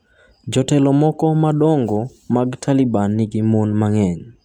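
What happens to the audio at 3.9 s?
Hard clipping affects the speech from 3.83 s to 4.03 s. The level reaches the ceiling of a stage in the chain (an overdrive of about 0 dB), so only the highest peaks are cut flat. That produces a brief crackle on the loudest moments rather than a continuous fuzz. On the waveform, the peaks in that span show flattened tops. On a spectrogram, faint vertical streaks of extra high-frequency energy appear where the peaks are cut.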